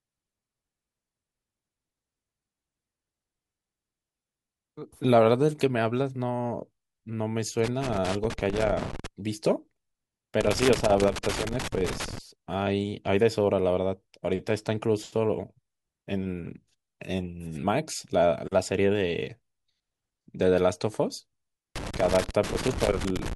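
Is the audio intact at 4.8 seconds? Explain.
Yes, the speech at 4.8 seconds plays through cleanly, with no dropout, click, distortion or other fault at that moment.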